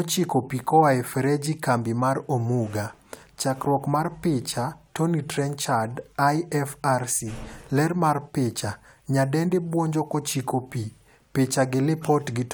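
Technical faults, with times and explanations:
No technical faults are audible anywhere in this speech.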